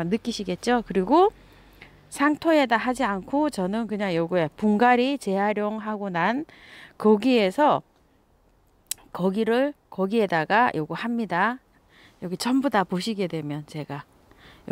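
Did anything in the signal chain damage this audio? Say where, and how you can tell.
No, nothing in the chain seems to have hurt this one, and I couldn't pin a problem on any stage from the wiring right through to playback.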